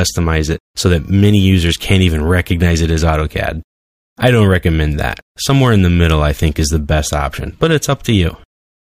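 Crackle on the loudest peaks roughs up the sound from 5.50 to 6.11 s and again from 7.63 to 8.15 s, a gritty edge rather than a constant fuzz. This is hard clipping. In both stretches the signal runs about 2 dB beyond what a stage in the chain can pass, so the tops of the waveform are sheared flat. Those squared-off peaks add harmonics high in the spectrum, heard as brief crackle wherever the level is highest.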